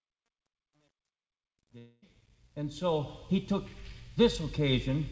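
From 0.00 to 3.25 s the fade-in shows truncation distortion: the gain stage keeps only about 10 bits without dither, so the rising low-level waveform collapses into coarse steps. Up to 2.35 s the sound is gritty, smoothing as the level climbs.

Between 1.78 and 2.04 s comes a long network dropout, likely from lost packets. About 240 ms of audio never arrives and is replaced by a concealment buzz that continues the preceding sound and decays, with no silent gap before the band-limited audio, empty above 8 kHz, resumes.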